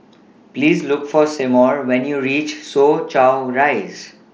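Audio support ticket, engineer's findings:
No faults found in the speech; the mSBC Bluetooth headset path is audible only as its normal wideband band limit and a light grain on louder syllables.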